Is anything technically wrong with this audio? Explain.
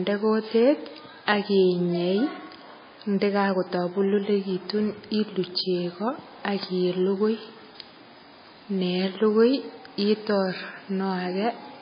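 Yes. Throughout, the speech is cut off above 5 kHz and sounds watery and swirly, likely from heavy MP3 compression at a low bitrate around 18 kbps; unlike a plain low-pass filter, the compression makes sibilants chirp.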